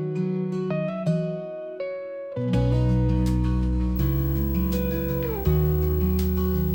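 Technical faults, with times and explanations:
3.96 s to the end, video or display buzz. A 59.94 Hz buzz comes in with a hash of harmonics above it and a thin 15.7 kHz whistle. A screen or video cable is leaking its field and line rates into the audio, roughly 15 dB below it.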